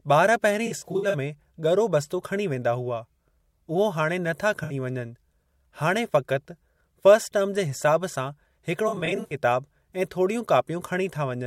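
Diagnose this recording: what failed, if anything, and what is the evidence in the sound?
The codec stage failed: AAC frame loss with concealment. Smeared, noisy, phasey patches break up the speech from 0.66 to 1.15 s, at 4.63 to 4.73 s, and from 8.88 to 9.35 s. The outer two are scattered losses, with the longest run around 70 ms. The decoder fills each gap by re-using the last good spectrum, so the sound blurs rather than dropping out. Unlike a buffer underrun, there are no hard clicks or silent gaps.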